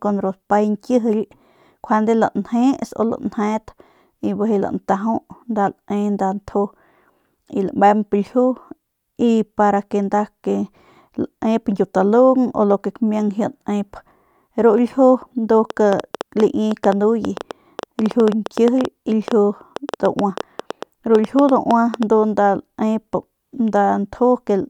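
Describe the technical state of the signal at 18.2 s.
At 18.2 s the speech sits under a train of clicks running from 15.70 to 22.04 s: around fifty similar pulses at about 7 per second, unevenly spaced and peaking roughly 10 dB above the signal, likely from electrical interference. Their repeated, uniform shape distinguishes them from random vinyl-style crackle.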